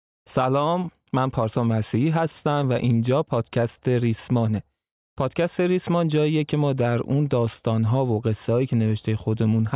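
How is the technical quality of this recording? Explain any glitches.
Nothing stood out on listening to this recording, and no glitches could be heard anywhere in it.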